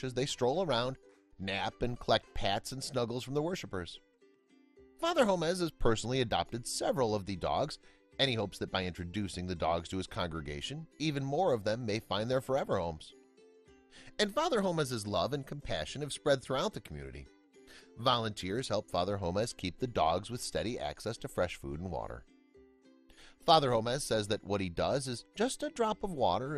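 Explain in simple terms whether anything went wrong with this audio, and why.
Nothing went wrong with this audio; listening closely turns up no technical fault anywhere in the recording. There are no sudden breaks, glitches or odd changes in the sound that would point to a problem along the way.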